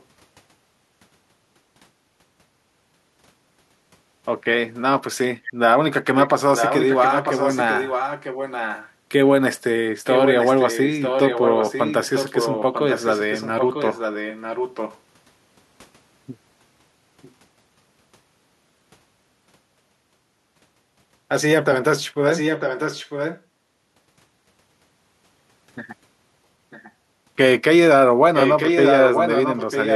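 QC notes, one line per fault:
5.44–5.5, 6.2–6.28, 6.56–8.9, 10.06–14.98, 22.29–23.42, 26.7–26.92, 28.34–29.95 s: echo leak. A copy of the speech returns about 0.95 s late, from faint to nearly full level. Likely a far-end loudspeaker feeding its microphone past the echo canceller.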